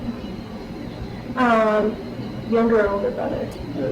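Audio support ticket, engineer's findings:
Corrupt frame decoded: short bursts at 1.81–1.84 s (loud) and 3.51–3.58 s (quieter), spanning about two and three frames respectively. Decoder played damaged bitstream, misplacing energy across frequencies.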